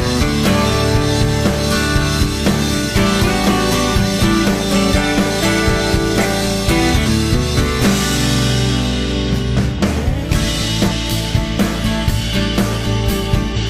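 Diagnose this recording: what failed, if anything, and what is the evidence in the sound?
The codec stage is at fault: compressed frames are skipped. At 4.88, 7.02, 10.87 and 13.52 s the sound jumps forward, losing roughly 300, 400, 200 and 400 ms respectively. The gap sizes fit whole frames of about 46.4 ms going missing or being thrown out by the decoder as damaged.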